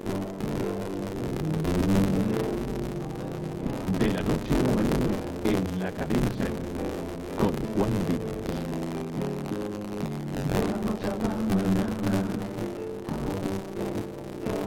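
A robotic 93.8 Hz rattle runs throughout with the sound. This is buffer tearing: most of each period, fitting a 512-sample buffer, replays audio about 30 ms old.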